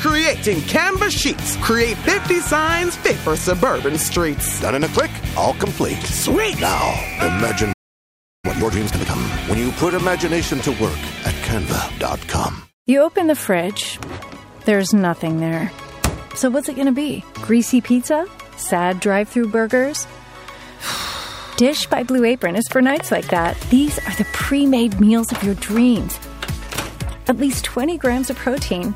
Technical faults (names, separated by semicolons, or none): playback stall; time-compressed catch-up